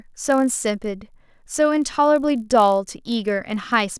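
A 50 Hz buzz runs under the speech throughout, from a resampler restarted on every block, leaving an error at each 20 ms block edge.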